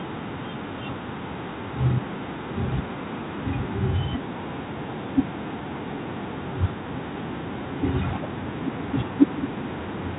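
No technical faults can be heard anywhere in this speech. It carries the narrow sound of G.711 telephone coding, with nothing above 4 kHz, as a normal fixed-line call path would.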